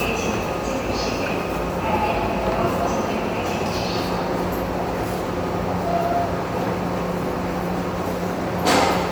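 An everyday sound recording with generation loss throughout: the audio sounds swirly, smeared and hollow, with blurred attacks and nothing above 20.1 kHz. This is likely from around seven successive MP3 encodes, with the texture fitting a 128 kbit/s chain compounding quantisation noise and spectral holes.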